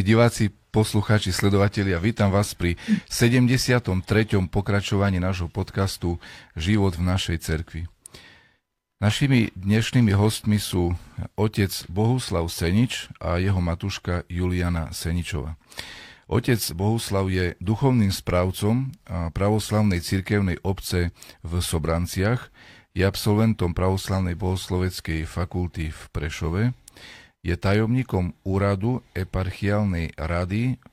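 Speech recording with no audible technical faults anywhere in the clip.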